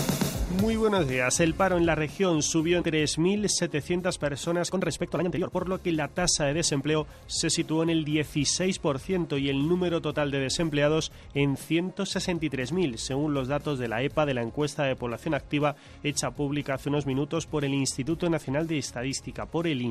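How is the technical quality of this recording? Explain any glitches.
Two glitches stand out.

At 2.81 s there's a skip ahead. A chunk of about a second and a half was dropped while later audio was already queued, so playback jumps straight to it. The two sides butt together almost seamlessly, so the sound just lurches forward.

From 3.99 s to 6.95 s you get a jitter buffer speed-up. The buffer was holding more than its target, so the receiver kept trimming tiny pitch-period-sized slices, around a second in total. Playback runs about 130% fast at unchanged pitch and sounds rushed.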